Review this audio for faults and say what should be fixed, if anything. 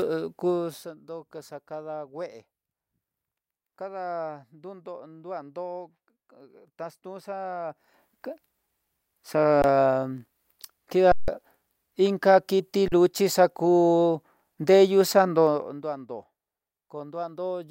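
A rapid ticking, like a zip being pulled, rides on the speech from 7.64 to 8.02 s as the level rises by about 15 dB, and again from 15.42 to 15.9 s as it falls by about 15 dB. This is zipper noise: the gain moves in unsmoothed 1 dB jumps, roughly 50 per second, and each jump leaves a small click. Interpolating the gain per sample, or ramping it across each block, would remove it.

The speech briefly freezes to a flat, held level and then resumes at 9.62 s, from 11.12 to 11.28 s (160 ms), and from 12.88 to 12.92 s (40 ms). This is an underrun with held sample. The output buffer emptied and the converter held its last value, so audio was skipped: about 20 ms, 150 ms and 40 ms respectively. Giving the output a larger buffer, or running the audio thread at higher priority so it keeps the buffer filled, would prevent it.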